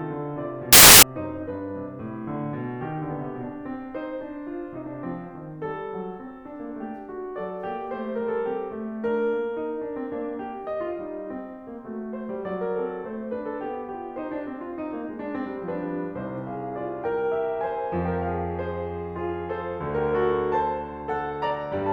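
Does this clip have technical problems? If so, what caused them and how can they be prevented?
Yes. From 0.73 to 1.03 s the music is replaced by a burst of loud, harsh broadband noise, the signature of samples built from the wrong bytes. For those 0.3 s the reader assembled each sample incorrectly, offset by a byte, with the byte order swapped, or with the wrong alignment assumed, so the rapidly fluctuating low-order bits landed in the high-order position and dominated every value. Prevention: enforce the declared sample format, endianness and frame alignment when parsing, and resynchronise on frame boundaries after any read error.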